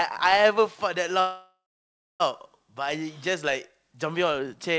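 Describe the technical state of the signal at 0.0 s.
At 0.0 s the speech is intact, with no fault present, only the limited bandwidth of a call path using the G.722 codec, which leaves nothing above 8 kHz.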